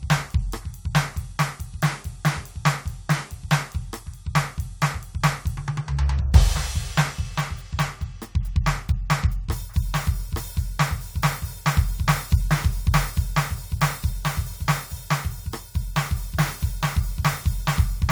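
The music reaches the listener with its level, timing and tone intact, and nothing in the signal path can be heard going wrong at any point in the clip.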